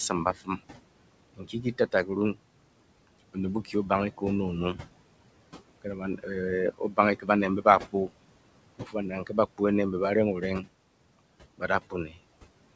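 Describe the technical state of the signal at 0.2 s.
At 0.2 s the speech sounds swallowed: soft consonants and word edges fade out, dipping by about 17 dB at the deepest point. This is speech cut by the noise suppressor, which lasts from 0.09 to 0.6 s and affects roughly 150 ms in total. The suppressor mistook those low-level parts of the speech for background noise and turned them down along with it, so the quiet detail is thinned away instead of being kept.

Under that moment the background also moves oddly. It sinks in the gaps and swells back beneath the speech. These are noise suppressor artifacts, present for the whole clip. The suppressor cuts the steady room noise by about 21 dB on a frame-by-frame basis, so that noise, sitting about 14 dB below the speech, rises and falls instead of staying even. The sound carries nothing above 8 kHz, consistent with the call path's bandwidth.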